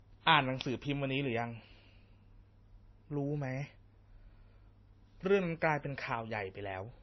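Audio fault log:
throughout: transcoding between lossy codecs. The speech carries two layers of coding damage at once, heard together, and nothing above about 5.9 kHz. The likely cause is a low-rate MP3 stage, consistent with around 24 kbit/s, re-encoded to WMA at a rate near 48 kbit/s. The second encoder spent its bits on the first one's artefacts and added its own. On a spectrogram there is a hard ceiling near 5.9 kHz.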